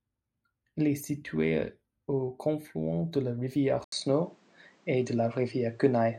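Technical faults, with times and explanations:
3.84 s to 6.18 s, input switched to a poorer device: the system likely changed its capture source to another microphone or a headset's call profile right after "confluent de la rivière". An 80 ms silence marks the switch. From then on nothing reaches above 9 kHz, so the speech turns dull and boxy. The level shifts by roughly 5 dB, and a new background noise floor sits around 40 dB below the signal, coming from the different device's own circuitry and pickup.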